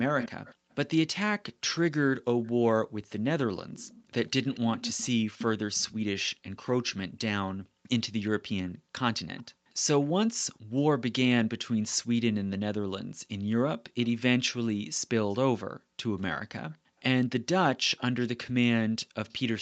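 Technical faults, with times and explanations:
0.19–6.62 s, 8.28–11.85 s and 14.03–19.33 s, echo leak: a second copy of the speech trails the original by about 238 ms. In the first run it is fairly prominent, about 10 dB below the speech; in the later two it sinks to about 25 dB down and becomes a ghost. The likely cause is a far end on loudspeaker whose echo canceller let part of its microphone pickup through and sent it back.
0.56–0.68 s, 2.83–2.95 s, 7.53–9.67 s, 14.8–16.99 s and 19.05–19.12 s, background gated by the echo canceller: the room sound suddenly drops away by up to about 40 dB, then returns. At 0.56 and 2.83 s the gaps last about a tenth of a second, and at 19.05 s about 70 ms. In the two longer spans the dips add up to about 0.7 s and 0.5 s. The canceller clamped the microphone down hard while the loudspeaker played, then released it.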